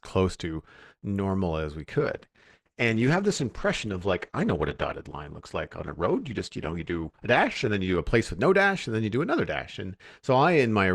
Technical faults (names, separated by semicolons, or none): adaptive stream at a lower bitrate